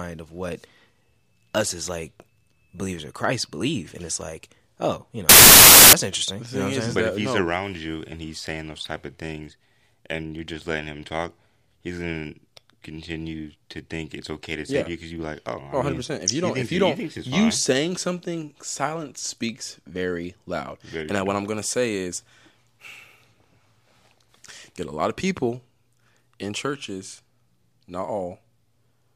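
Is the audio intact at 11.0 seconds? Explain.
Yes, the audio is intact at 11.0 seconds, with no audible fault at that moment.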